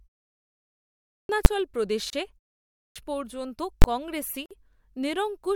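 Right at 1.03 s the speech comes in abruptly after a silent stretch. That's a clipped start after a pause: the output device dozed off in the quiet and took about 260 ms to wake, so the opening sounds of the word never made it out.

At 1.45 s there's a single sharp bang. That's invalid numbers at full scale. A 10 ms block went to infinite or invalid values, which got pinned to the maximum level. A block that short collapses into one loud pop.

At 2.10 s the speech cuts out for about 29 ms and then resumes where it stopped. That's a gap at a join of encoded pieces. Separately encoded chunks were spliced without trimming the encoder delay and padding, so a slightly smeared hole opens in otherwise continuous sound.

At 2.67 s, after a 0.36 s pause, the same clipped start turns up again. Roughly 290 ms is lost right before "পর্যন্ত কংগ্রেসই", so the phrase jumps in already underway.

From 3.82 to 3.84 s there's another invalid-numbers block, 20 ms pinned flat at an extreme value, heard as a hard, loud click.

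At 4.46 s, just after "পর্যন্ত কংগ্রেসই", a second join gap opens for about 49 ms before the sound picks back up.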